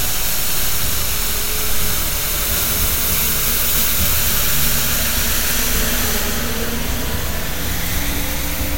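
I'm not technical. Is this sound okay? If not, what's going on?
Yes, this sound is okay. There's nothing here that needs fixing.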